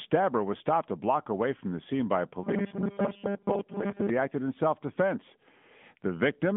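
AMR narrowband mobile codec damage runs through the whole clip. The speech has been squeezed into a phone-line band of about 150 Hz to 3.5 kHz, with nothing above 3.7 kHz, so sibilants and air are gone. The speech is rebuilt from a vocal-tract model driven by sparse pulses, and at this level the damage is plainly audible: a buzzy, synthetic edge that points to a mid-rate mode of around 10 kbps.

Robotic sound from repeated short buffers appears from 2.43 to 4.09 s, between "from the scene by" and "he acted in self". The speech turns into a rigid, metallic buzz pitched at 200 Hz while still loosely tracking the syllables. That buzz matches a 5 ms chunk being replayed over and over, most likely because fresh audio reached the playback buffer too rarely. Most of the sound in this stretch is repetition rather than new audio.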